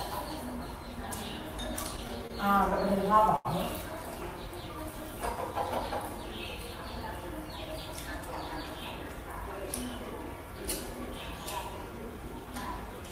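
Between 1.83 and 2.32 s, and again from 2.70 to 3.47 s, the audio shows repeated stalls (stutter). Packets arrived late, the jitter buffer kept running dry, and the receiver held the last sound going until data caught up. The first run has four short hitches, the longest 26 ms. The second has six, reaching 85 ms, long enough that the held sound fades. Nothing is lost; the sound catches and drags in separate jolts rather than stretching evenly.

From 4.48 to 6.03 s there is a jitter buffer slow-down. With its reserve low, the receiver repeated single pitch periods over and over, adding 115 ms and running the passage at 93% speed. Pitch stays put while sounds are drawn out. Unlike the stutter, the lengthening is spread smoothly across the span instead of arriving as discrete hitches.

Between 7.92 and 9.42 s comes a jitter buffer speed-up, the mirror case. The buffer held more than its target, so the receiver trimmed short pieces of a pitch period or so, many times in a row, removing around 150 ms and playing at 110% speed. 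The pitch is unchanged but the pacing sounds hurried. That steady pitch is what separates it from a simple fast playback, which would raise the pitch.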